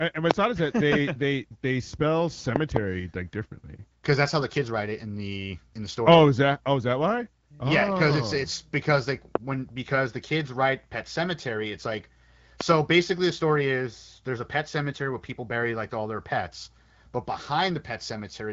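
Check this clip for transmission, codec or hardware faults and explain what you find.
Six loud pops, in four events, sit on top of the speech, which carries on underneath each one. Single sharp pops land at 0.31 to 0.33 s and 9.35 to 9.38 s. Double pops in quick succession occur at 2.56 to 2.79 s and 12.61 to 12.74 s. They peak far above the speech level, roughly 20 to 25 dB louder. The likely cause is a sudden voltage step or spike, such as from a connector, switch or static discharge. The following circuitry shaped that step into a brief thump. The clear but band-limited speech is consistent with the AMR wideband (HD Voice) codec running at around 12.65 kbit/s.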